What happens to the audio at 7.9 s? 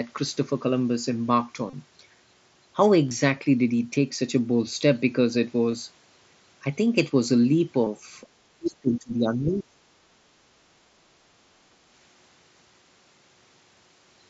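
Right at 7.85 s there's a brief concealed Bluetooth headset packet loss: about 15 ms of audio, which fits a couple of dropped headset frames, went missing, and the phone patched the gap by repeating a closely matching stretch of the preceding waveform.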